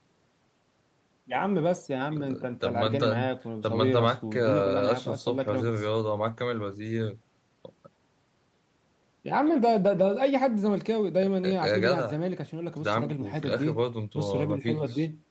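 Speech band-limited at 8 kHz, consistent with call microphone processing and an Opus WebRTC call path around 32 kbps, with no faults found.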